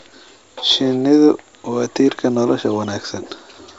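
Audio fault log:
The speech comes through G.722 wideband telephone coding, with its upper band ending at 7.8 kHz and a character that fits the full 64 kbit/s mode, and no fault is present.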